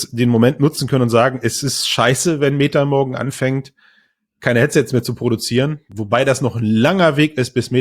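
Chunks out of order occur at 0.75 to 0.77 s in this speech clip. A block of about 10.67 ms was delivered one chunk late and plays after its successor. No audio is missing, but the swapped order leaves three abrupt joins, heard as a brief jumbled flicker.

Overlap between stream segments appears at 5.92 s. Two 4.0 s segments carried timestamps that overlapped, so the player trimmed the overlap from audio that was never duplicated. A sliver vanishes there, the waveform jumps, and the result is a single click or tiny skip.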